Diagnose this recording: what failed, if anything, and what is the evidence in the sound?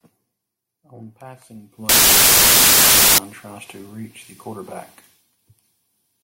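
The failure is at sample-format conversion: samples built from the wrong bytes. From 1.89 s to 3.18 s the speech is replaced by loud, harsh broadband noise. It stops just before "tries to reach the". The byte order or alignment of each sample was misread. The rapidly changing low bits then landed in the high part of every value. Random-looking large numbers resulted.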